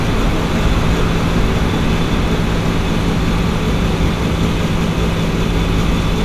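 No technical faults can be heard anywhere in the audio, and the signal holds steady throughout.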